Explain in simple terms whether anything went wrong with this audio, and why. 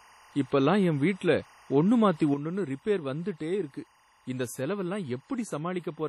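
Yes, three things went wrong.

Behind the speech, for the whole clip, there is a faint, steady chirping warble that flips between two pitches, around 1 kHz and 2 kHz. That is timecode bleed: the sync signal used to keep recorders and cameras lined up, running here at 24 frames per second, has leaked from a nearby track or cable into the audio. It doesn't follow the speech at all, which is why it sounds like a separate mechanical chatter underneath.

The whole recording also sounds washy and heavily ringing, with a hiss that swells and fades along with the speech, and the very top of the sound is missing, with nothing above 14.4 kHz. This is the kind of damage WMA compression leaves, likely from saving at a low-quality setting. To shrink the file, the encoder smears small errors across short stretches of time and throws away quiet detail, so a swishy haze clings to each sound.

At 2.34 seconds, right after "என் வீட்டுல ஒன்னு மாத்தி", the level drops abruptly and stays a good deal quieter until the end. 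The speech and the background hiss fall together in a single step, with no fade. That is a sudden gain jump, likely caused by a volume setting being changed instantly in the digital chain rather than eased in gradually.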